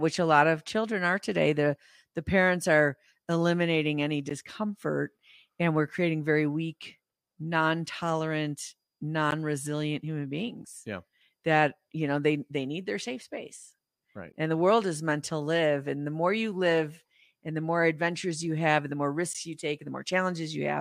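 Gaps between chunks occur at 4.29, 9.31, 14.32 and 19.33 s, the first after "parents are eliminating any". Each 13 ms silence marks a join between 5-second chunks. Each is heard as a brief hole in the speech.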